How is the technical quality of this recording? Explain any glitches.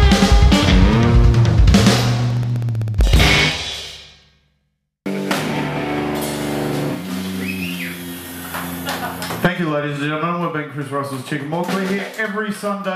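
The recording has one audible fault. Periodic USB or driver dropouts run from 2.24 to 4.68 s: about forty short ticks, one every 64 ms, each a roughly millisecond-long silent gap where a blocked bus or driver lost samples. Their strict, clock-like spacing sets them apart from randomly timed network dropouts.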